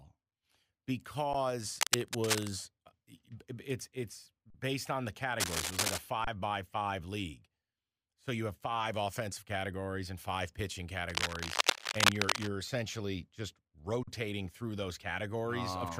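Underrun with held sample at 1.33 s: the output buffer ran dry for about 11 ms, which fits a 512-sample buffer. The converter froze on its last value, so the speech flattens briefly, then resumes where it stopped with no lost audio and only a soft edge.

Cable scratch noise from 1.76 to 2.50 s, just before "it's it's based on": dense, uneven rustling at roughly the level of the speech, likely from a worn cable or connector being moved so its contact resistance jittered.

Underrun with held sample at 4.50 s, between "it's it's" and "based on the": a longer held-flat stretch of about 43 ms, which fits a 2048-sample buffer. Playback picks up where it paused, so the join is soft rather than clicking.

Cable scratch noise from 5.40 to 6.01 s: another burst of scratchy crackle at roughly speech level, likely from a disturbed contact.

Underrun with held sample at 6.25 s: the signal sticks at one level for about 27 ms, then continues with nothing missing.

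Cable scratch noise from 11.09 to 12.49 s, between "categories and five pitching" and "essentially just": the longest and loudest burst, about 5 dB above the speech, likely from a moving connector.

Underrun with held sample at 14.03 s: a 43 ms flat hold, again fitting a 2048-sample buffer, resuming softly with no audio lost.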